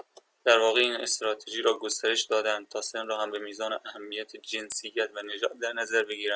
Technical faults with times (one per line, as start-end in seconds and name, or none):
0.00-6.35 resampler restarted on every block